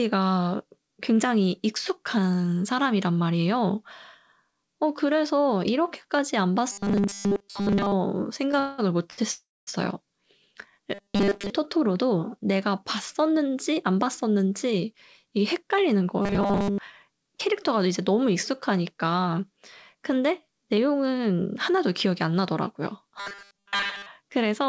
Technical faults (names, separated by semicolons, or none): robotic sound from repeated short buffers; call audio freeze; short stall from a late packet; jitter buffer speed-up